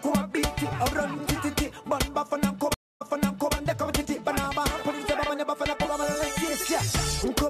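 At 2.74 s the stream drops out in a stream reconnect that lasts until about 3.54 s. The connection broke, the player fell silent for 263 ms, then reconnected and started a new decoder partway into the stream. When sound returns it has jumped back 534 ms, so the listener hears that stretch of audio a second time, as though the server resent a burst. The first moment after the restart comes in muted or fading up rather than at full level.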